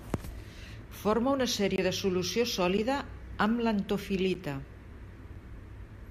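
Blocks of digital silence hit at 1.76–1.78 s (21 ms) and at 2.77 s and 4.34 s (11 ms each), fitting unfilled 1024- and 512-sample buffers. The first is a short hole and the other two are short ticks, each a flat notch in the waveform and a blank spectrogram column.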